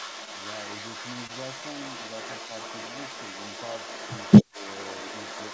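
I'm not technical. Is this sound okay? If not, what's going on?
No, there are a few problems. The biggest is an echo leak running through the whole clip: a second copy of the speech trails about 0.23 s behind, roughly as loud as the original. That's likely a speakerphone on the other end whose echo cancelling didn't catch everything, so its sound got sent back.

Around 1.27 to 1.31 s there's a short stall from a late packet. A piece of audio arrived late, so the receiver stretched the last sound for about 26 ms while it waited, then carried on where it left off. Nothing is lost, but that moment sounds slightly held.

From 4.44 to 4.66 s the speech drops sharply for about 0.2 s. This is likely speech suppressed in double talk: both sides were talking at once, and the echo canceller, unable to tell them apart, turned the sound down.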